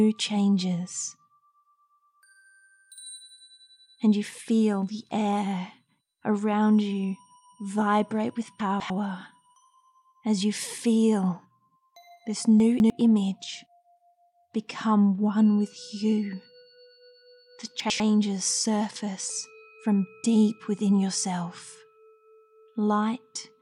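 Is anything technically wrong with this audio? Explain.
Yes. Chunks out of order occur at 8.6–8.9 s, 12.6–12.9 s and 17.8–18.0 s. A 100 ms block plays two blocks late (one at 17.8 s), leaving a brief jumbled stretch with hard joins. Unlike a dropout, no sound is lost, only reordered.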